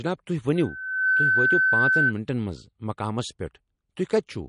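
From start to end, the speech likely passed through MP3 compression at a low bitrate, around 40 kbps. The encoder dropped weak frequency lines and removed everything above 10.6 kHz, so the damage is plainly audible: a watery, swirling texture with dulled treble and smeared attacks.

From 0.55 to 2.13 s, a loudspeaker feedback squeal occurs: the microphone picked up the loudspeaker it was feeding, and loop gain passed unity at 1.5 kHz. That single tone grows over about half a second into a squeal about 5 dB above the speech.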